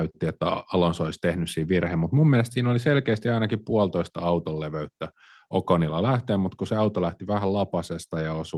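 No technical faults turn up anywhere in this recording, so there's nothing to trace along its timeline.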